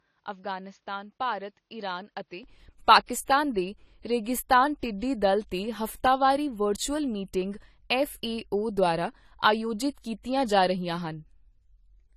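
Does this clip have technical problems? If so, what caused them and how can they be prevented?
Yes. Throughout the speech, the top of the spectrum is missing, with nothing above 14 kHz, and there is the smeared, swirly texture of a heavily compressed source. This is low-bitrate audio saved at a high bitrate: the file is a generous MP3, but its sound points to an earlier low-bitrate encode, likely around 32 kbit/s AAC, whose losses the later encode simply preserved. To prevent it, always encode from the original uncompressed recording rather than from a compressed copy.

From 0.00 s to 2.43 s, the audio is dull and boxy, with nothing above 6.7 kHz. It is also about 10 dB quieter and carries a different, faint noise floor well below the signal. At "ਪਾਕਿਸਤਾਨ ਦੇ ਰੇਗਿਸਤਾਨ ਟਿੱਡੀਦਲ" it opens up again with no gap. This is an input switched to a poorer device, likely a headset call profile or a second microphone active at the start before the main one took over. 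To prevent it, lock the recording input to a single device before starting.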